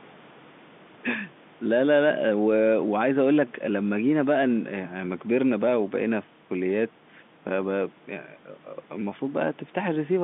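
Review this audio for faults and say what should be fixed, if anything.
Nothing in this speech recording needs fixing. It carries the narrow band of G.711 telephone coding, roughly 150 Hz to 3.6 kHz, which fits a 64 kbps A-law line.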